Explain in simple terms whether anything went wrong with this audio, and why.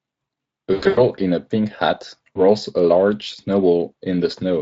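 Two short dropouts here are VoIP packet loss concealed by the speech codec. From 0.73 to 1.01 s, chunks of the stream went missing, and the decoder filled the gaps by stretching the last bit of voice it had, so the speech smears into a buzzy, fading tone and sounds weak for a moment after it comes back. A second, much briefer blip hits at 2.35 to 2.40 s. The Speex codec underneath leaves only a light coarseness.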